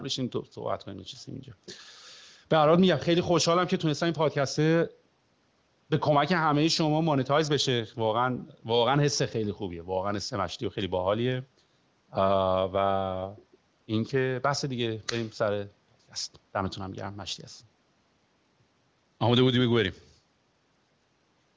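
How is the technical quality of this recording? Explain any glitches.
Nothing stood out on listening to this speech recording, which carries the narrow top end of a call microphone chain and an AMR wideband (HD Voice) codec at a high bitrate, leaving no glitches to explain.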